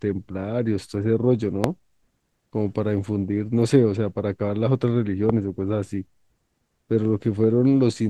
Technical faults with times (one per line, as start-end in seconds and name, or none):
1.64-1.66 loud pop
5.29-5.32 loud pop